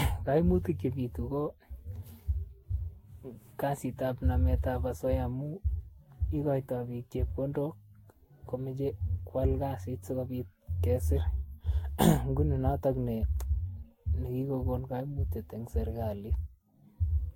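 Generation loss runs through this speech clip from start to finish: the sound is swirly, smeared and hollow, attacks are blurred, and nothing sits above 16.7 kHz. It likely comes from about five successive lossy passes, each requantising on a shifted frame grid, consistent with Vorbis at around 60 kbit/s.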